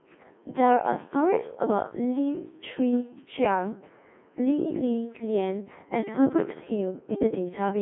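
Robotic, buzzy speech runs the whole way through, with a hollow synthetic quality and nothing audible above about 3.6 kHz; the low end also falls away below roughly 200 Hz, leaving a narrow telephone-style band up to 3.4 kHz. This is Codec 2 vocoder damage, and heavy: the decoder rebuilds the voice from sine waves using only pitch, voicing, energy and a spectral envelope, so the original waveform is lost. The thinness fits a 1.6 kbit/s mode.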